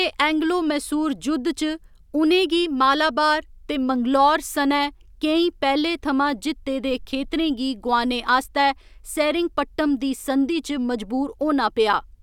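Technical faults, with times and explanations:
No technical faults are heard anywhere in the speech.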